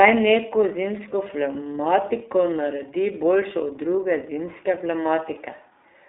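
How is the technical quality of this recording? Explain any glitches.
The quality is limited by one codec fault running through the whole clip.

iLBC codec, present from start to finish: the speech has been squeezed through a narrowband VoIP codec that codes each short frame independently, and the plainly audible damage fits its 13.33 kbps mode with 30 ms frames. The line keeps only roughly 300 Hz to 3.7 kHz, so the voice sounds thin and telephone-like, without low body or crisp sibilants. Because every frame's excitation is rebuilt separately, the speech comes out slightly rough and synthetic.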